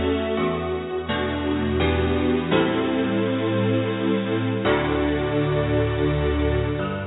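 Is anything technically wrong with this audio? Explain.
No, nothing technically wrong can be heard here.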